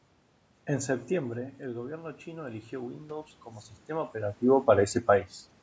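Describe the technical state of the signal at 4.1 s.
Automatic gain rising is under way at 4.1 s, within a slow ramp from 1.29 s to 4.42 s. After the level reaching the microphone fell by about 13 dB, the automatic gain control judged the input too quiet and pushed its gain up by about 6 dB over roughly three seconds. At this point the ramp is nearly finished, so the speech and the room noise behind it have swelled together, both sounding louder than they did before the rise began.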